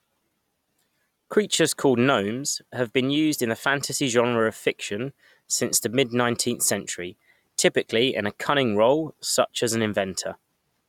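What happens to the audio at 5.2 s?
Nothing goes wrong at 5.2 s: the speech plays through that moment intact, with no dropout, click or distortion.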